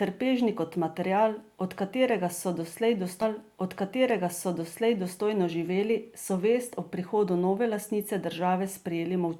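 At 3.21 s there's a stream segment repeated: the player queued the same chunk of speech twice, so two seconds get replayed, running to 5.21 s, with a small blip right where it jumps back. It stretches the clip by a full 2 s.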